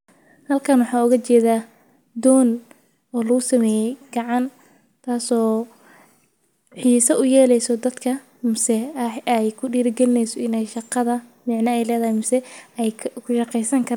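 No technical faults occur in the speech at any point, so there is nothing to describe in time order.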